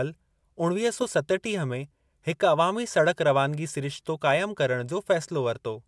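Nothing stood out as a technical fault on listening to this speech recording.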